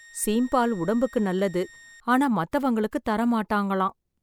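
A speech clip with a switching supply whistle from 0.0 to 2.0 s, ending just before "ஆனா மத்தவங்களுக்கு": a thin high tone wandering between 1.85 and 1.86 kHz, roughly 25 dB under the speech, from a switching power supply whining in audible burst mode or beating with another one. A spectrogram would show a faint, slightly wavering horizontal line.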